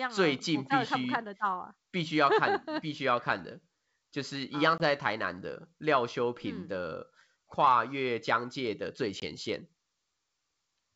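A speech clip with two brief dropouts, at 4.78 to 4.83 s and 9.20 to 9.24 s, where the sound cuts to hard-edged silence and comes back slightly distorted before settling. This is packet loss on an ADPCM call, each gap about 20 ms, roughly one packet. The missing audio leaves the decoder's adaptive predictor and step size out of step with the sender's until they resynchronise. The clean wideband sound around the gaps fits G.722 coding at 64 kbit/s.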